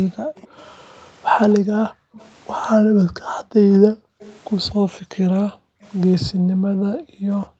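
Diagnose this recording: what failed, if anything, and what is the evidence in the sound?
The far end's echo canceller, in the call-processing stage, likely let part of its loudspeaker pickup through, producing an echo leak. A faint delayed copy of the speech trails the original by 245 ms, about 25 dB down, from 0.13 to 2.3 s and again from 4.2 to 4.73 s. A brief scrap at 5.83 to 5.91 s sits lower, around 35 dB below the speech. The fixed delay marks it as an acoustic loop, not reverberation.

The same echo canceller also shows background gated by the echo canceller. Its suppressor clamps the microphone gain while the loudspeaker is active, so the room tone collapses instead of carrying on under the speech. A short dip of about 21 dB runs from 0.26 to 0.3 s. From 1.6 s to the end, the background is held down by as much as about 40 dB.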